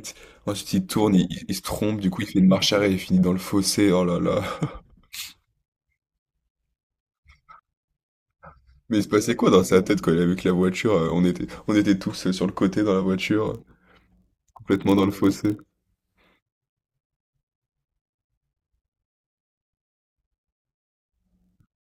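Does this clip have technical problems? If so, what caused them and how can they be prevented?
Yes. From 13.45 s to the end at 21.86 s, the speech carries a block size mismatch (padded). One stage delivers blocks slightly shorter than the next stage reads. The missing samples are filled with zeros. Each block therefore contains a tiny silent gap. These gaps repeat at 43.1 Hz and produce a steady buzz, which fits a 1024-sample read block. The gaps are very short, so the speech slows only to 0.999 of its speed and keeps its pitch. To prevent this, make every stage write and read the same block size, or buffer the audio so that short writes are joined before the next stage reads them.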